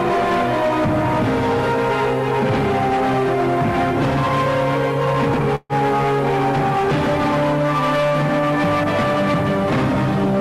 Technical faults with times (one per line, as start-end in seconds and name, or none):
5.55-5.72 call audio freeze